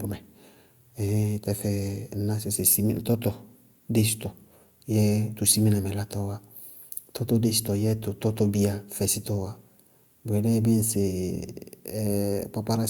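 Listening to the speech here, nothing stood out as a technical problem at any point.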